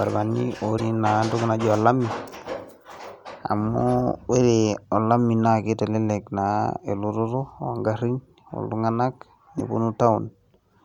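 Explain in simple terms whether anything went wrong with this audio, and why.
Two brief glitches skip the speech ahead, at 0.77–0.80 s and 9.58–9.61 s. A broken MP3 bit reservoir is the likely cause, after dropped audio chunks.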